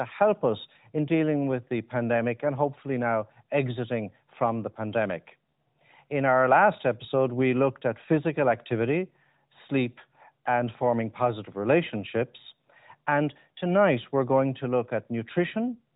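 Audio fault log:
No faults detected.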